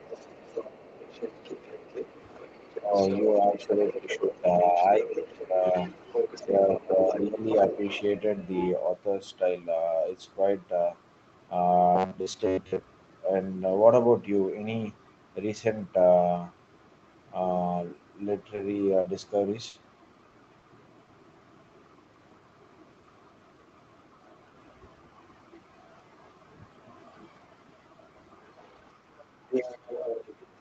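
Right from the start, 0.0 to 8.7 s, there's a second voice sitting underneath, roughly 15 dB below the main talker. That's most likely the other side's voice leaking through: their loudspeaker playback got picked up by the mic and the echo canceller didn't fully scrub it out, so you get a copy of the far end riding along with the speech.

Overlapping that, there are two spots of speech suppressed in double talk, from 2.8 to 5.75 s and again from 6.46 to 7.42 s. The talker's level sags by up to about 10 dB, over about two seconds in the first stretch and only a fraction of a second in the second. With both voices going at once, the canceller likely couldn't tell its own talker from the echo and just ducked everything, so the voice dips and loses its top end in patches.

From 11.96 to 12.82 s the speech goes robotic, a classic case of robotic sound from repeated short buffers. Audio was arriving too seldom, so most of that stretch is the same tiny slice looped over and over while the real audio got skipped. 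The repetition stamps a fixed buzz at 93.8 Hz onto it, which points to a buffer around 10.7 ms long. It still vaguely tracks the speech, but it sounds metallic and rigid.

Around 18.55 to 18.60 s there's a short stall from a late packet. The jitter buffer ran dry, and the receiver held the last sound for 20 ms until the packet showed up, then carried on from the same spot. The delay shifted by 20 ms, but nothing is actually lost. You just hear a tiny hold with a faint buzz.

Then comes a cluster of drops. There's short concealed packet loss at 19.01 to 19.08 s, 20.30 to 20.37 s, and 20.58 to 20.65 s, with 40 ms missing each time and patched over by extending the last sound before blending back in. Each one is a brief smear or wobble, and a consonant could easily vanish in there.

In the middle of that cluster, at 19.69 to 19.77 s, is a small burst of packet loss. About 40 ms of audio never arrived, and the receiver stretched the previous sound across 50 ms, fading it as it went. 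That gives a short held buzz or fading hiss, then the speech jumps ahead with a bit missing. All of this is coming through a call path with nothing above 8 kHz, which fits an Opus stream at around 20 kbps.

Finally, from 28.62 to 30.47 s, the other side's voice likely leaks through again, and it's stronger this time, roughly 10 dB under the talker.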